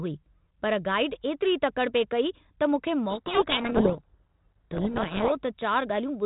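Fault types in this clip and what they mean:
codec payload misread: From 3.1 to 5.37 s the decoder unpacks G.726 code words in the wrong bit order, burying the speech under harsh distortion.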